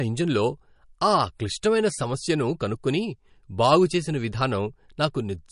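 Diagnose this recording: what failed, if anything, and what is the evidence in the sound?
The codec stage likely failed through MP3 compression: throughout the speech, treble stops dead at 10.6 kHz, a flat ceiling on a spectrogram, and plainly audible swirly, watery artefacts from weak bands blinking between frames show as scattered holes, which fits a bitrate around 40 kbps.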